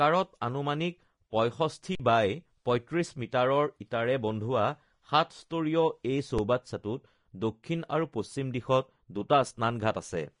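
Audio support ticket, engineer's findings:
Vorbis compression, throughout. Hissy, grainy treble, nothing above about 10.6 kHz, plainly audible codec damage on the speech. Likely a low-bitrate Vorbis encode, around 34 kbps: coarse quantisation of the residue over the spectral floor turns fine high-frequency detail into noise.

Underrun with held sample, 1.95–2.00 s (about 47 ms) and 6.38 s (about 5 ms). Output buffer ran dry, converter held its last value, giving a flat, frozen waveform. The longer gap fits a 2048-sample buffer. About 50 ms and 5 ms of live audio lost.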